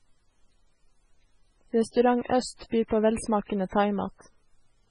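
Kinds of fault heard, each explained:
MP3 compression: treble cut above 10.4 kHz and weak components flickering frame to frame, heard as heavy watery swirl; likely low-bitrate MP3, around 16 kbps.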